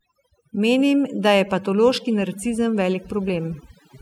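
From the first moment to the last, this speech clip has overdone noise removal. The denoiser was pushed too hard, so any frequency band sitting close to its idea of the noise floor gets pulled way down or cut outright, and the softer parts of the voice get caught along with the noise. Between phrases the background drops to near silence with little twinkling specks.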